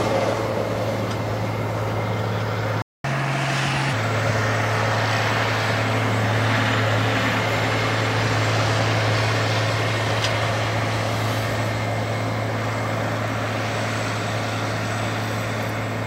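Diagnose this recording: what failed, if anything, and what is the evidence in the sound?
Playback stall, at the playback stage. At 2.82 s the sound cuts to silence in mid-flow and stays silent until 3.04 s, a gap of about 0.22 s. It then resumes where it stopped, with no material missing. The likely cause is the player's output buffer running dry or its audio thread being blocked. The device was left with nothing to render until data arrived again.

Catch-up at higher speed, also at the playback stage. From 3.04 s to 3.93 s, right after the stall, the audio runs at 1.25 times normal speed. Its pitch rises by roughly four semitones, so it sounds audibly sharp and hurried. It then drops back to normal. The player is resampling its accumulated backlog to recover the lost time. Because it speeds up by resampling instead of time-stretching, speed and pitch rise together.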